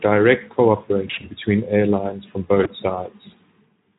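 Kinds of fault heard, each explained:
VoIP packet loss concealed by the speech codec: short losses near 1.1 s and 2.6 s become fading, buzzy smears of the preceding sound, unlike a silent dropout.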